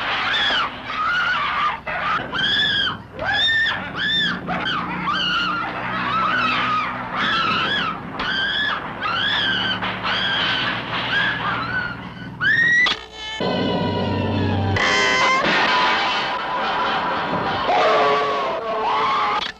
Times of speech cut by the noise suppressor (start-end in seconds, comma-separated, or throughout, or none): none